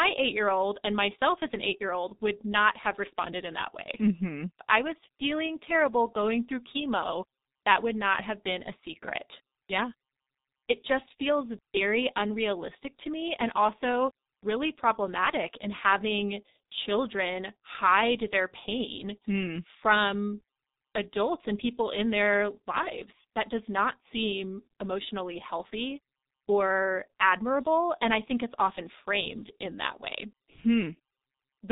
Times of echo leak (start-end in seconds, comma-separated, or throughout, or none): none